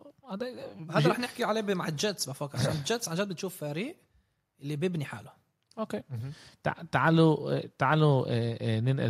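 No technical faults audible anywhere in the speech recording.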